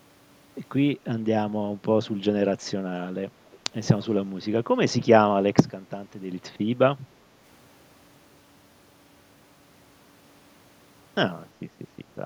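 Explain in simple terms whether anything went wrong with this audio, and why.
Echo leak, from 3.52 to 3.58 s: a very faint, brief copy of the speech comes back about 0.34 s after the original. The likely cause is that the other side was using a loudspeaker, and its microphone picked the sound up again. The echo canceller, whose job is to remove that returning sound, missed this short scrap, so it was sent back down the line as a faint, delayed echo.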